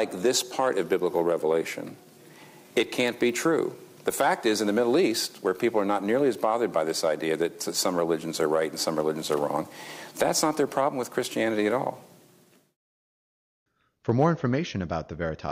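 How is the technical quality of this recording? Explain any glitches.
The recording has one glitch, a brief burst of hard clipping from 14.09 to 14.26 s. For that instant the sound drives about 2 dB past what the chain can pass, so its peaks are sliced flat. The flat tops add high harmonics heard as a short crackle. Unlike gentle saturation, the edge is abrupt and gritty rather than warm.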